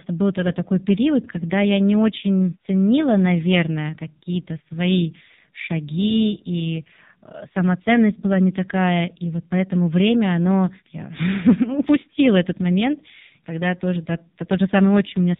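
AMR narrowband mobile codec damage runs throughout the speech: everything above 4 kHz is gone, and each 20 ms frame is rebuilt from a vocal-tract model and sparse pulses, giving a heavy buzzy, synthetic quality that fits a low mode around 5.9 kbps.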